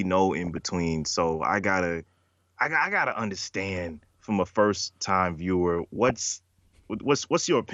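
Throughout, the speech sounds dull and gurgling, likely from MP2 compression at a low rate, around 80 kbit/s. Upper sub-bands drop out and quantisation is coarse. DAB burbling hits from 0.44 to 0.72 s, 3.69 to 4.15 s, and 5.79 to 6.22 s. Sparse bit errors corrupt sub-band samples frame by frame, causing short blips of noise in single sub-bands.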